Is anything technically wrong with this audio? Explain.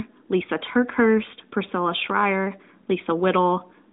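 No, nothing in this speech stood out as a technical problem on listening.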